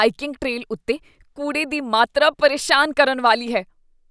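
No technical faults occur at any point in the recording.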